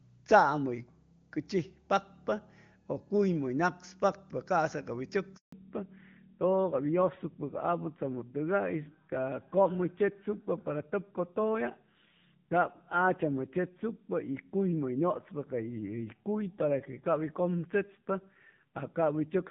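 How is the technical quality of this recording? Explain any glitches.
The recording has two linked glitches from a network handover partway through the call. Before it, the AMR wideband (HD Voice) codec sounds clear, its compression faint at most, which fits about 23.85 kbit/s.

Handover gap, 5.36 to 5.52 s: the call switched networks and no speech frames arrived, so the voice fades out and leaves 160 ms of silence.

Fallback to narrowband, from 5.52 s to the end: the link dropped to narrowband AMR, which points to about 7.4 kbit/s. With nothing above 4 kHz, the voice sounds duller and rougher.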